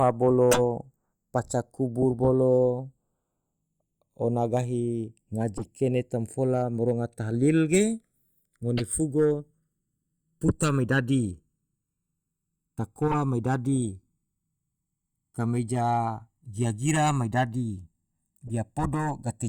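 Channels drifting apart runs through the whole clip. The two channels were captured on clocks that disagree by something like 50 ppm, so the offset between them creeps steadily and reaches around a millisecond by the end. When the channels are summed, the comb-filter notches that offset creates slide slowly across the spectrum, giving the speech a gradual, hollow flanging sweep that changes over the clip's length.

Corrupt frame decoded bursts occur at 0.51–0.60 s, 5.57–5.68 s, 8.77–8.81 s, 13.08–13.16 s and 18.47–18.54 s. In each, damaged bits in the compressed stream were decoded as if valid, so misread gains and codes scatter energy into the wrong frequencies. The durations suggest a few consecutive frames hit each time. Each is heard as a short chirp or noisy blip, peaking near −10 dBFS at first and about −25 dBFS in the last.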